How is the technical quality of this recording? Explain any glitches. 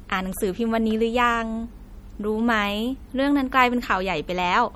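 The speech is plainly degraded from start to finish. The high end sounds dull and cut off, and the sound has a watery, swirling texture, with consonant edges smeared. The likely cause is MP3 compression at a low bitrate, with the damage fitting roughly 48 kbps. Starved of bits, the encoder removes the treble above a fixed frequency and drops weaker frequency components. Those components flicker in and out from frame to frame, which creates the swirling quality.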